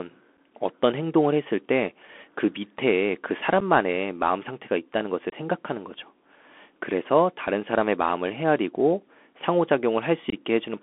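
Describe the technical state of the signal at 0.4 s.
Just before this moment, at 0.37 s, there is unconcealed Bluetooth headset packet loss: a gap of about 7.5 ms, which fits about one lost packet between headset and phone, filled with silence or an idle pattern instead of concealed. It is heard as a brief hole with an abrupt edge, and the speech returns quieter for an instant. On a waveform it looks like a sharp-edged notch. On a spectrogram it is a thin vertical dropout.

Throughout, including at 0.4 s, the signal carries the Bluetooth CVSD headset codec. This one-bit delta modulation, which fits a 64 kbps link with an adaptive step, confines the audio to a line band of roughly 250 Hz to 3.4 kHz. Damage is plainly audible: sibilants turn scratchy, loud bright sounds outrun the step and distort, and a granular hiss sits beneath the speech. A spectrogram shows an empty band above 3.4 kHz and a grainy noise floor.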